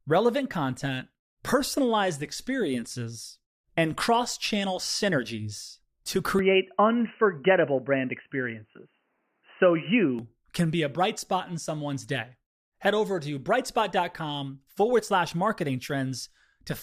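Input switched to a poorer device, 6.39 to 10.19 s: after "cross channel synergies to", sound turns dull and boxy, nothing above 3 kHz, level shifts around 5 dB, faint new noise, likely a device change, until "can be a bright".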